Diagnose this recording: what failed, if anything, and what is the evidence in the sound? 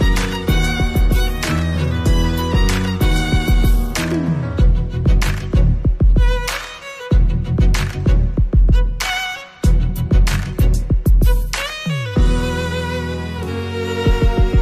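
Nothing stood out on listening that would point to a failure at any stage of the chain.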